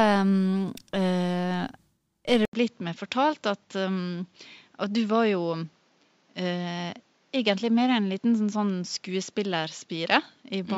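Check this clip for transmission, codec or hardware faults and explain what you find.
One fault is present: at 2.45 s the speech cuts out for about 80 ms and resumes sounding duller, which is likely an input switched to a poorer device that stays in use to the end of the clip. The new path passes nothing above 7.6 kHz, so sibilants and air lose their top end. The level drops by about 5 dB, and a new noise floor appears roughly 40 dB below the speech, giving a flatter, boxier character.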